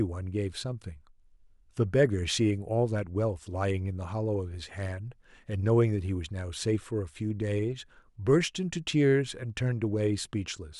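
No technical faults can be heard anywhere in the speech.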